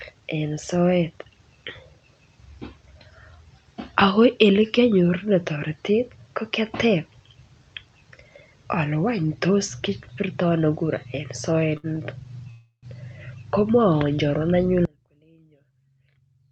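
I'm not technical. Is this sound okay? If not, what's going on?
No. At 11.77 to 11.86 s, a short stall from a late packet occurred: one piece of the call arrived late, so the last sound was stretched briefly, then continued with nothing lost.

At 12.51 to 12.86 s there is a call audio freeze, likely from packets held up in transit. The sound buzzes or hisses and fades, including a brief silence, then resumes where it stopped.

From 14.85 s to the end, an audio dropout to a faint residue leaves only a faint trace of the sound, far quieter than before, as the signal cuts out abruptly.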